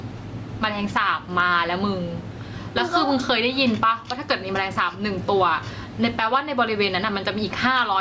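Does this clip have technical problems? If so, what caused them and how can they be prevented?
Yes. Gain pumping runs throughout the speech, a swing of around 15 dB, likely from excessive input gain driving a fast limiter. Lowering microphone gain prevents it.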